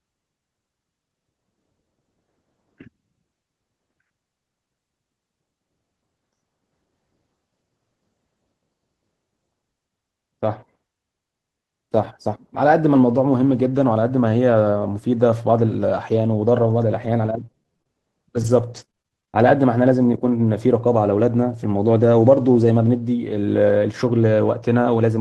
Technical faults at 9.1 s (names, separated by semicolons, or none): none